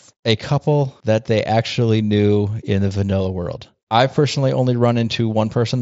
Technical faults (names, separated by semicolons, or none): none